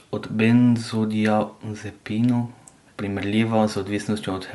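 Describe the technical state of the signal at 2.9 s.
At 2.9 s the speech has a plainly audible breathy, grainy edge with nothing above 11.6 kHz, as it does across the whole clip. This is likely Bluetooth LC3 compression: the codec thins and noise-fills the upper spectrum, consistent with 10 ms frames at around 48 kbps.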